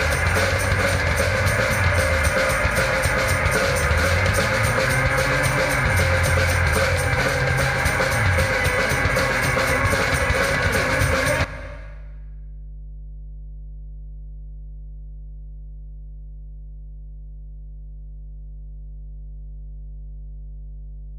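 A steady low tone runs under the sound for the whole clip. This is mains hum at 50 Hz. It sits fairly loud, roughly 15 dB below the wanted audio. A ground loop or nearby transformer is coupling the power line into the signal path.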